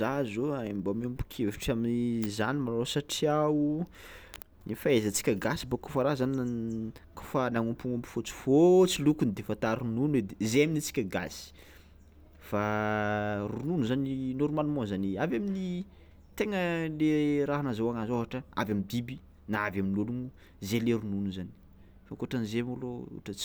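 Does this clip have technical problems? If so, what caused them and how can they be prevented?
No, no technical faults here.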